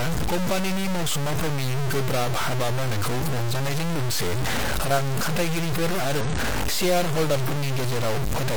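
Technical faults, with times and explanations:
Throughout: low bit depth without dither. Grainy distortion follows the speech at roughly the signal's own level, likely from truncation to about 3 bits, so quiet passages sputter.
6.21 to 6.26 s: damaged data in a compressed stream. A brief 50 ms blip occurs where corrupted frames are misread and the decoder loses sync before finding the next valid frame.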